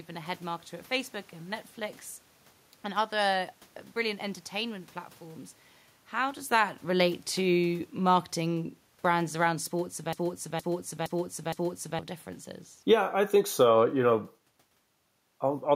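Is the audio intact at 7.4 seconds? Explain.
No. From 6.27 to 9.63 s, automatic gain falling: the gain control judged the input too loud and eased its gain down by about 5 dB, so speech and background sink together.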